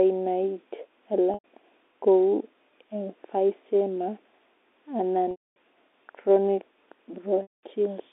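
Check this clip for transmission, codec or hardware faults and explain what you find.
There are three dropouts from packet loss with pitch repetition, at 1.34–1.44 s (100 ms), 5.31–5.56 s (250 ms) and 7.42–7.63 s (210 ms). Each time, the receiver loops the last pitch period to cover the gap, so you hear a brief buzzy held tone. It fades out over about 50 ms into silence, and the speech cross-fades back in. The G.711 telephone band underneath is audible as the usual 150 Hz to 3.7 kHz line sound.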